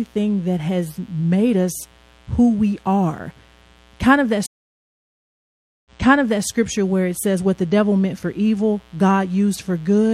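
A mains buzz runs through the whole clip. It sits about 30 dB below the speech, steady and raspy. Its base is 60 Hz, but it does not sound like a clean hum. Sharp switching spikes, such as from a dimmer, a rectifier or a missing shield, enter the signal twice per mains cycle. That puts a dense ladder of 60 Hz harmonics up into the kilohertz range. The result is a gritty edge under everything.

At 4.46 s a stream reconnect begins. The speech drops out into about 1.4 s of silence. The connection broke, and the player waited, reconnected and started a new decoder mid-stream. When sound returns, it does not pick up where it left off. It jumps back about 0.6 s, so a stretch of speech is heard twice. The server resent a burst of earlier audio. The disturbance ends at 6.47 s.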